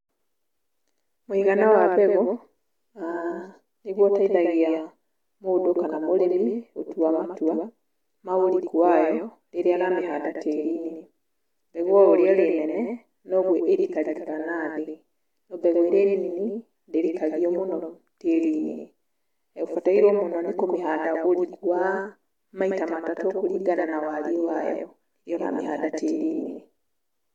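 A doubled audio track persists throughout the speech: a somewhat quieter copy lags roughly 100 ms, likely from double capture, doubling every waveform onset.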